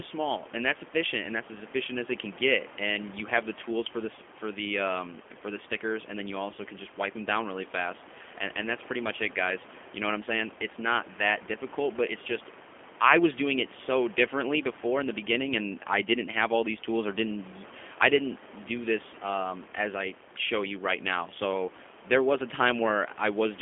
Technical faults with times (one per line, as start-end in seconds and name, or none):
0.00-23.62 G.729 codec